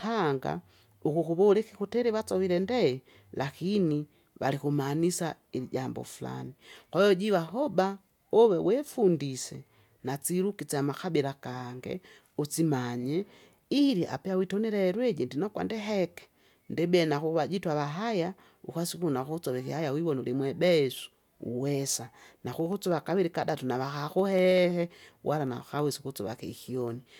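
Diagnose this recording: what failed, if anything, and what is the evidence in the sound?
Periodic USB or driver dropouts at the driver/USB stage: from 21.83 s to 27.13 s the speech carries regular ticks every 64 ms, about a hundred in all. Each skips a fraction of a millisecond, splicing the waveform with a small step that appears as evenly spaced thin vertical lines on a spectrogram.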